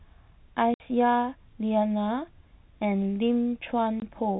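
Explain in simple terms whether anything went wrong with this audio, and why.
Packet loss filled with silence cuts the speech twice, from 0.74 to 0.80 s and from 4.00 to 4.02 s. Chunks of audio never arrived, so the receiver played silence instead, leaving abrupt gaps with hard edges. The lengths fit lost 20 ms packets.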